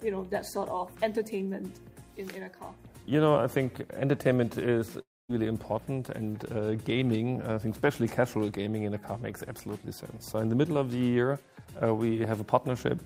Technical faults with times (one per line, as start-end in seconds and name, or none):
5.01-5.31 long network dropout